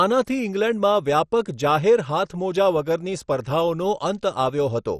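Throughout the speech, nothing is present above 13.9 kHz, and the remaining top end sounds dull, with a gurgling, granular texture as upper bands drop in and out. This is likely heavy MP2 compression with starved sub-band bit allocation, consistent with a rate near 56 kbps.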